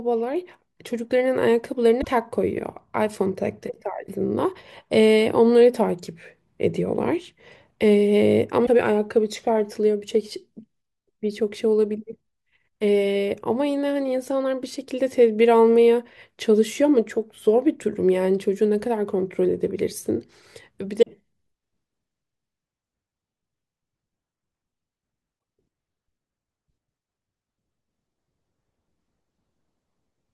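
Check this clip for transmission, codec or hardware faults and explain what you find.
There is one kind of fault, damaged data in a compressed stream, occurring four times: 1.98–2.07 s, 8.63–8.69 s, 20.99–21.04 s and 25.36–25.38 s. At each point, corrupted bytes in the encoded speech stream cause the decoder to misread the affected frames and lose sync until it locks onto the next valid frame header. Each one is heard as a brief chirp, squawk, click or short hole lasting roughly 25 to 85 ms, breaking into the speech.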